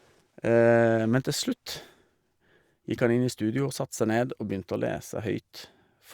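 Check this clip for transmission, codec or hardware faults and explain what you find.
Nothing stood out on listening to this speech recording.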